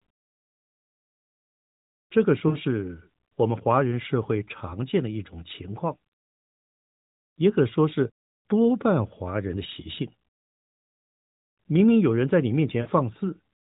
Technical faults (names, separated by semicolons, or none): lost AMR speech frames